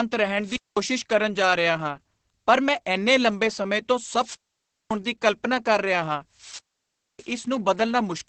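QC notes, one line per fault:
throughout: Opus voice compression. Nothing is left above 8.6 kHz, and the top of the band sounds dull. Speech is muffled and hoarse with a slightly robotic edge. The coder models the voice as a predicted filter driven by a crudely coded excitation, so fine texture is lost. The heavy damage and the narrow band point to Opus in SILK mode at a low rate, around 10 kbps, with wideband coding.
0.40–0.84 s, 4.18–4.97 s, 6.33–7.35 s: wireless microphone squelch dropout. Each event starts with a brief swell of hiss as the radio signal fades. The receiver's squelch then cuts the output to near silence. These holes last about 0.21 s, 0.56 s and 0.61 s. The voice returns once the signal recovers and the squelch opens again.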